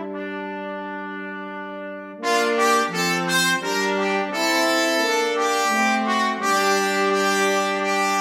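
Nothing in this audio stands out as a technical fault; it runs its whole course with no dropouts, glitches or other problems to point to.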